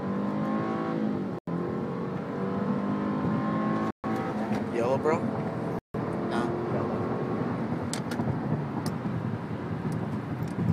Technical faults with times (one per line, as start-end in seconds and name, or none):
1.39-1.48 Bluetooth stall
3.91-4.06 Bluetooth stall
5.79-5.95 Bluetooth stall